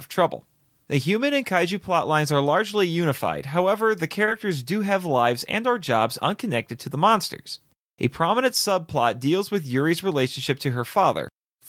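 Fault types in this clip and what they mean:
Short concealed packet loss: about 20 ms of the call arrived too late for the decoder, around 4.25 to 4.29 s, and the receiver papered over it by extending the preceding sound before blending back in. You hear it as a tiny smear or wobble in the speech there.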